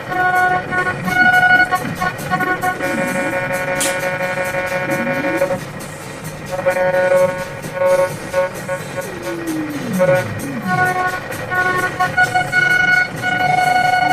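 At 1.09 to 1.11 s there is a skip ahead: around 0.4 s of audio was dropped with nothing filled in, so the sound jumps forward and the two sides meet almost directly. The waveform shows an abrupt seam, and spectrogram features change suddenly with no gap.

From 1.20 to 2.75 s, and again from 5.41 to 5.88 s, a jitter buffer speed-up trims short pitch-period pieces to reduce the backlog. Playback runs at 107% and then 109%, with pitch unchanged and a hurried feel. The spectrogram shows compressed events without any shift in frequency, and about a tenth of a second and a twentieth of a second are removed.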